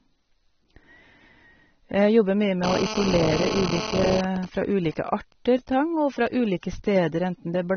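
Throughout, the speech sounds dull and smeared, with nothing above 6.4 kHz. This plainly audible damage likely comes from AAC compression, fitting a low bitrate near 24 kbps.

From 2.64 to 4.21 s, GSM phone buzz appears. A nearby 2G phone in a call transmits 217 times a second. The audio circuit rectifies these pulses into a raspy, harmonic-rich buzz about 6 dB below the speech.

From 4.24 to 5.33 s, GSM signalling bursts follow, well below the speech. With the phone's user silent, it sends only brief groups of 217 Hz bursts. These give even ticks and a longer buzz twice a second.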